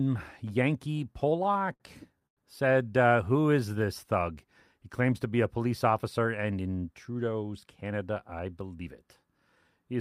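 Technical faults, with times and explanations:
1.13–1.82 s, repeated stalls (stutter): speech drags and stutters as nine gaps, up to 64 ms, are filled by continuing the last sound while late packets empty the jitter buffer.
2.27–2.39 s, short stall from a late packet: one sound is held about 99 ms too long, stretched until the missing packet arrives, adding the same delay afterwards.
3.33–3.86 s, jitter buffer slow-down: speech runs slower at unchanged pitch, about 87% speed, as repeated pitch periods add 74 ms to rebuild the buffer's reserve.
5.91–6.53 s, jitter buffer speed-up: right after "to be a police", speech sounds hurried at about 109% speed as roughly 70 ms of short pitch-period pieces are cut to reduce delay.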